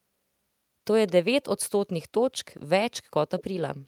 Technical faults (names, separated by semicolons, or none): echo leak